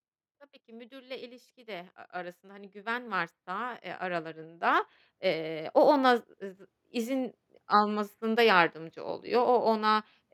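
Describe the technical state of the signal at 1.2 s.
At 1.2 s you're early in an automatic gain rising stretch that runs from 0.65 s to 5.72 s. The AGC has judged the input too quiet and is slowly pushing its gain up, about 19 dB in all, so the speech and the background noise swell together.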